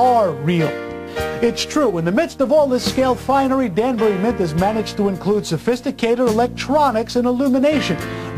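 Nothing stood out on listening; no problems could be heard anywhere in the audio.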